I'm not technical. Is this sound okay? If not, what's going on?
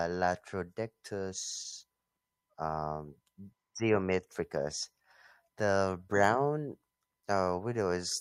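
Yes, this speech recording sounds fine, with no technical problems to point out. Nothing in it needs fixing.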